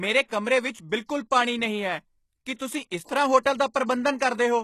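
Throughout, the treble is bright yet synthetic: s sounds come out gritty and lispy, and nothing reaches above 12.3 kHz. This is likely HE-AAC compression, with the damage plainly audible and consistent with a low bitrate near 16 kbps. The codec keeps only the lower spectrum and rebuilds the top by copying lower bands upward, so the upper harmonics don't line up with the ones below. Unlike a plain low-pass, which would sound dull, the highs are still present but sound false.

Pre-echo then appears at 2.55 to 2.60 s, 3.04 to 3.09 s and 3.43 to 3.45 s, spreading roughly 51, 48 and 22 ms ahead of each onset. The codec spread its block's quantisation noise over the quiet moment before a sharp attack, so a short hiss leads in and the attack itself sounds softened. Because the smear comes before the onset rather than after it, it is not reverb or a decay tail.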